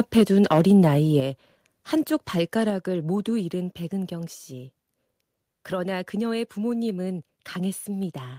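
From 0.51 to 0.88 s, the loudest peaks turn harsh and crackly, pushing about 3 dB past the converter's limit. This is likely microphone overload, with a small share of samples clipped. At 1.2 s and again at 2.7 s, the voice and background drop suddenly, by about 7 dB and then about 4 dB. The microphone volume was likely stepped down by software reacting to the distortion.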